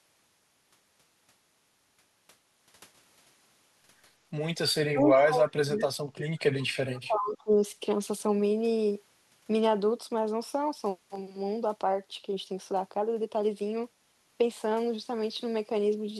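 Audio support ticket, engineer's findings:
Speech suppressed in double talk, 4.8–6.36 s and 6.68–7.6 s. Talker level dips hard, deepest roughly 35 dB down, across about 1.5 s and then about 1 s. Likely echo canceller misjudging simultaneous far-end speech as echo and attenuating both. Not packet loss: no clicks or repeated fragments, and the suppression follows the overlap rather than arriving as isolated gaps.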